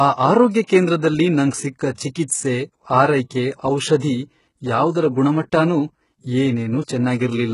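Right through the speech, the top end sounds synthetic and gritty, with nothing above 11.1 kHz, likely heavy HE-AAC compression at a bitrate around 12 kbps, treble rebuilt from lower bands.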